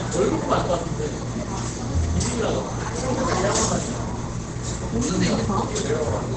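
From start to finish, the sound is muffled and hoarse. Nothing reaches above about 8.8 kHz, so the top of the spectrum is simply gone. The damage is heavy and steady across the whole clip. The likely cause is Opus compression at a very low rate, fitting roughly 12 kbps. At that rate the encoder drops into its SILK speech mode with a wideband limit, which narrows and roughens everything it carries.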